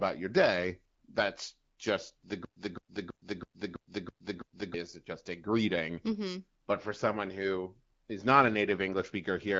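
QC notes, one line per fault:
2.45–4.74 s, stutter with silent gaps: after "just the", a 212 ms burst repeats seven times every 328 ms, with about 116 ms of digital silence between, until "just a greeting". This is likely a stalled stream replaying its last fragment. The waveform shows identical blocks separated by flat zero lines.
4.38–4.42 s, AMR bit errors: a brief hoarse, gargly scratch where a few percent of the weaker codec bits arrived flipped. Excitation pulses and fine gain and spectral values decode wrongly. On the spectrogram, harmonics smear into ragged noise for under 50 ms.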